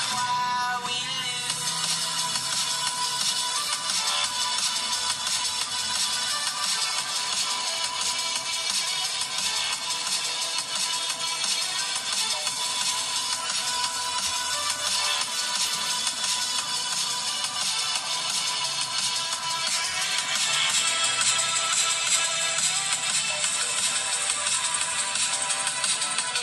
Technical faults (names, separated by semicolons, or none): none